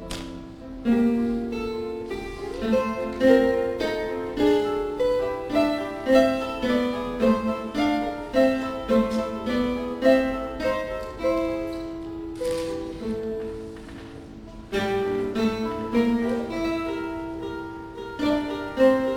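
No technical faults can be heard anywhere in this clip.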